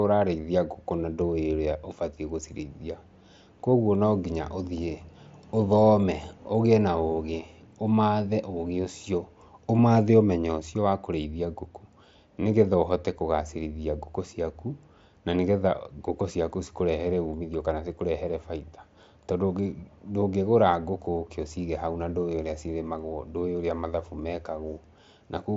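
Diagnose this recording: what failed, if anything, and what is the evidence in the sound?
Nothing failed: the speech comes over a wideband Bluetooth headset link using mSBC, with nothing above 7.8 kHz and the light codec grain that path leaves, and no stage in the chain shows a fault.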